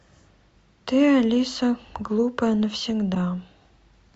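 A corrupt frame decoded appears at 3.14 to 3.17 s in this speech clip, a brief burst lasting about 24 ms. The damage is consistent with a single compressed frame whose bits were flipped in storage or transmission. The decoder played it anyway, so misread codes and wrong gains placed energy at the wrong frequencies for that frame. It comes across as a short glitch with a peak of roughly -20 dBFS.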